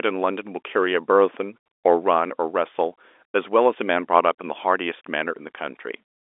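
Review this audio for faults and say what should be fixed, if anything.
Nothing here needs fixing: the speech runs over ordinary G.711 telephone coding, so it sits in the usual phone band of roughly 300 Hz to 3.6 kHz with nothing above 3.8 kHz, which is simply how that line sounds.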